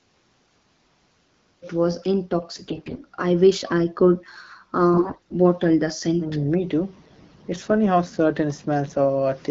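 From 2.51 to 3.03 s and again from 4.94 to 5.34 s the speech turns hoarse and gargly, with AMR bit errors on a weak link. The lightly protected bits of each frame arrive flipped, on the order of 15 percent, while the checksum on the core bits still passes, so frames decode instead of being muted. The excitation pulses land in the wrong places and the fine gain and spectral values drift. Pitch and level hold roughly steady, which separates this from dropouts or concealment.

Between 6.16 and 6.41 s the talker's level dips by about 15 dB, totalling roughly 150 ms, likely speech suppressed in double talk. Both sides spoke at once, and the echo canceller, unable to tell its own talker from loudspeaker echo, turned everything down. The result is a drop in level rather than the scratchy texture heard in the bit-error bursts.

From 6.99 to 7.34 s the same gargly AMR bit-error roughness returns, a little milder, at an error rate nearer 10 percent. 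The underlying AMR wideband (HD Voice) coding sounds clear, which fits a 12.65 kbit/s mode.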